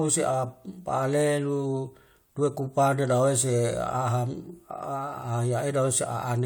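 No technical faults can be heard anywhere in the recording.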